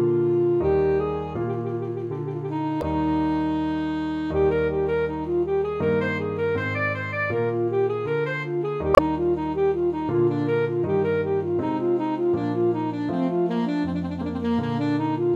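Two short bursts of damaged data in a compressed stream break into the audio, from 2.79 to 2.84 s and 8.92 to 8.99 s. Each is a brief glitch where the decoder misread corrupted frames and lost sync. On a spectrogram each shows as a narrow broadband smear, and on the waveform as an abrupt, jagged discontinuity.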